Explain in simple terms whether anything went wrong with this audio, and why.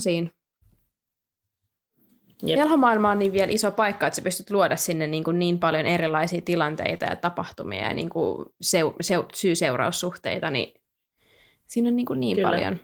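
A few short glitches, all caused by lost data on a call. Five times there was a lost packet rebuilt from error correction: 3.75 to 3.77 s, 6.07 to 6.09 s, 6.93 to 6.95 s, 7.92 to 7.94 s, and 9.08 to 9.10 s. Each time a backup copy filled a 20 ms hole, so nothing drops out, but those moments sound a bit rough and fuzzy.

From 6.97 to 7.02 s there is a short concealed packet loss. About 20 ms never arrived, and the player stretched the previous sound to cover it. You hear a quick smear or wobble.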